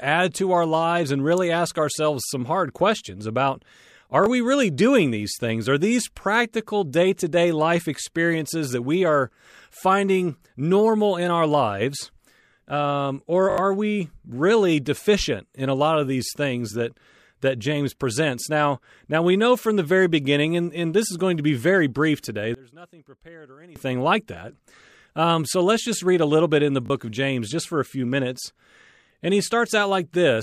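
Playback ran out of fresh audio three times in this speech recording, so the device replayed its last block, a repeated buffer. Each repeat fits a 20 ms buffer. At 4.24 to 4.26 s one block sounds twice, at 13.50 to 13.58 s it sounds five times, and at 26.86 to 26.90 s three times. Each gives a hard-edged stutter, and roughly 20, 70 and 40 ms of audio are skipped. From 22.54 to 23.76 s, one channel inverted is the likely cause of the sound dropping by about 25 dB. The centred voice cancels in the mono sum, leaving only a faint residue of the channel difference.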